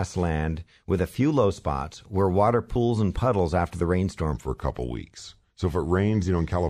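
It's a speech recording, and from 4.33 s right to the end there's a section at the wrong speed: it drops to about 0.88x, so the voice goes slower and roughly two semitones deeper. Most likely that stretch got played or edited against the wrong clock.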